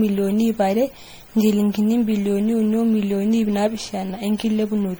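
Generation loss runs through the whole of the speech, from start to finish. The sound is swirly and hollow, with consonant attacks smeared and a watery, gappy texture in the upper range. That is more damage than a single lossy encode would leave, which fits MP3 at around 64 kbit/s applied repeatedly, likely about seven times over. Each pass requantised the audio on a shifted frame grid, so noise and spectral holes accumulated.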